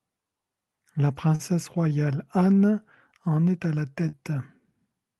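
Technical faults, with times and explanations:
1.35–1.42 s, short stall from a late packet: the speech briefly hangs, with the current sound held about 39 ms too long and a faint buzzy flatness before it moves on. A packet arrived after its playout time, so the jitter buffer ran dry and the receiver extended the last stretch of audio until the packet came in. Playback then resumed from the same point, so nothing is lost, but everything after runs about 39 ms later.
4.09–4.16 s, short concealed packet loss: right after "en est à la", a brief smear replaces the real sound. About 40 ms of audio never reached the decoder, and the receiver filled roughly 38 ms of that gap by continuing the preceding sound, using its pitch where it was voiced and shaped noise where it was not, then crossfading back into the arriving audio. The patch blurs the passage, and any short consonant in that window can disappear.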